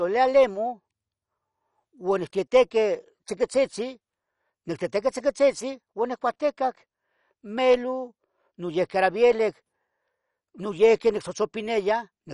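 Speech sounding dull and gurgling throughout, with a granular roughness and nothing above 11.3 kHz, points to likely MP2 compression at a low rate, roughly 48 kbps: upper sub-bands get starved of bits and switched off, while the remaining bands are coarsely quantised.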